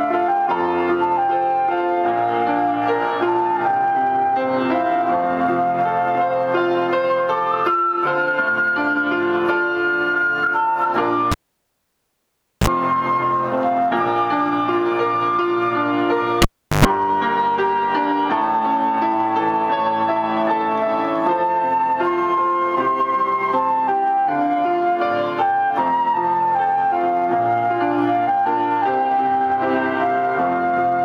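At 11.32 s a cable is pulled and plugged in: a pop, about 1.3 s of near silence, a 34 ms burst of 60 Hz buzz as the plug tip touches, then a second pop as the sound returns at 12.67 s. It recurs at 16.42 s with a 0.38 s gap and a longer 109 ms buzz, this time at 50 Hz. A plain dropout has no pops at both edges and no mains hum before the sound returns.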